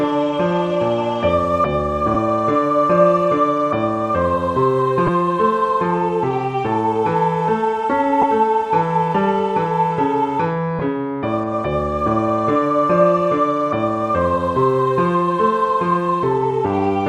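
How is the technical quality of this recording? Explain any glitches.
The recording has four brief gaps from lost LE Audio frames, at 2.14 s, 5.07 to 5.09 s, 8.22 s and 10.79 to 10.81 s. The first covers about 7.5 ms, which fits one lost frame. The others cover about 15 ms each, which fits two. The decoder fills each gap by repeating the last spectrum with randomised phase, so tones smear into a short noisy blur. On a spectrogram this shows as thin vertical smudges where the harmonic lines briefly turn diffuse. On the waveform it shows as tiny patches of irregular texture. Light lossy compression is also present, with only faint coding traces.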